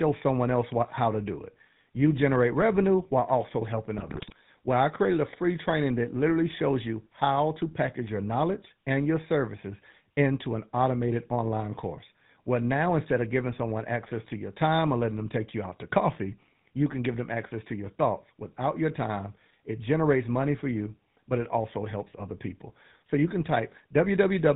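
The speech runs through the GSM full-rate codec from start to finish, its sound fitting the 13 kbps coder. The vocal tract is modelled and driven by sparse regular pulses, nothing passes above 4 kHz, and the voice comes out plainly buzzy and gravelly.

From 3.98 to 4.36 s, just after "revenue while also helping", GSM bit errors corrupt the decoder's filter, pitch and gain values across a run of frames, consistent with an error rate near 3%. The speech breaks into squawks, pops and gargling.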